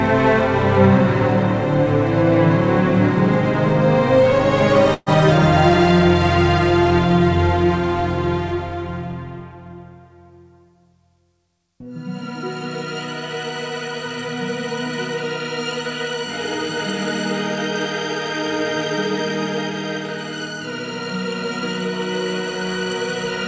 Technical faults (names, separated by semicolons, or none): burst of packet loss